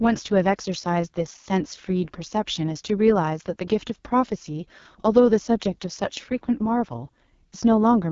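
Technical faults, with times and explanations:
Throughout: AMR wideband (HD Voice) codec damage, and heavy at that. The speech comes out rough and raspy, which fits the lowest AMR-WB mode, around 6.6 kbit/s. The band above 6.4 kHz is just shaped noise, and nothing gets past 7.1 kHz.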